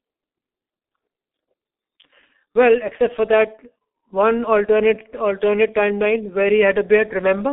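From start to finish, the speech carries G.723.1 codec damage, heavy throughout: nothing above 3.8 kHz, a narrow 250 Hz to 3.7 kHz band, and a hoarse, smeared texture that fits the 6.3 kbit/s mode. Unlike simple telephone filtering, consonants blur because the coarse 30 ms frames track the voice sluggishly.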